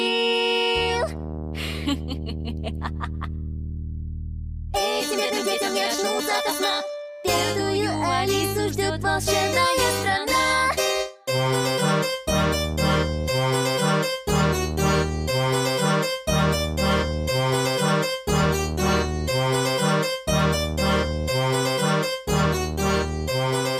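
Between 5.06 and 7.12 s the audio lurches into a time-stretched section, running about 1.73 times faster while its pitch stays put, so it turns rushed before snapping back to normal pace. The likely cause is software squeezing that stretch to fit a shorter length, dropping short slices to hold pitch. On a spectrogram, harmonic bands keep their height while events crowd closer together, and the waveform shows small seams where pieces were cut out.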